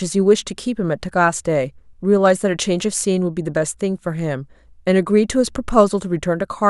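No technical faults are audible anywhere in the recording.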